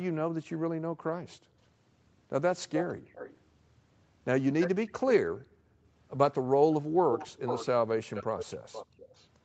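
At 0.80 to 1.01 s the echo canceller clamps the microphone while the far side plays, gating the background: room sound falls by about 40 dB for around 150 ms, then returns. From 2.74 to 3.39 s and again at 4.60 to 4.69 s, an echo leak is heard, likely because the far-end loudspeaker echo slipped past its canceller. It comes back as a delayed copy 308 ms late, about 10 dB under the speech. Gating returns from 5.28 to 5.85 s, about 40 dB deep for roughly half a second. The echo leak reappears at 7.11 to 7.66 s, now 454 ms late and only about 5 dB down. It returns from 8.14 to 9.28 s at about 15 dB down, with a brief gating dip of about 23 dB at 8.86 to 8.98 s.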